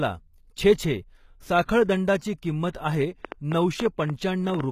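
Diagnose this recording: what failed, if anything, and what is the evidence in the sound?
The codec is where this went wrong. Throughout the speech nothing reaches above 14.9 kHz, and the treble sounds rebuilt rather than captured, with s sounds coming out gritty, metallic or lispy. The damage is plainly audible and likely comes from HE-AAC at something like 20 kbps.

Then there's a train of clicks from 3.25 s to 4.61 s: about ten similar pulses, around 5.9 per second on average but unevenly spaced, sitting roughly 10 dB above the signal. That points to the analogue side, likely interference from nearby equipment or a faulty connection or power supply.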